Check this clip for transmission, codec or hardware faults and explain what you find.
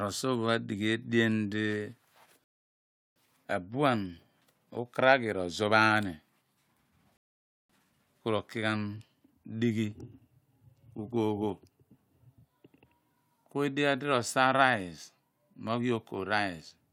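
The speech has two rebuffering stalls, at 2.44 to 3.16 s and 7.17 to 7.70 s, right before "ku ro ki ghan". Each time the player ran dry of downloaded audio and paused, so the sound drops to silence and picks up exactly where it left off, adding about 0.72 s and 0.53 s without losing anything.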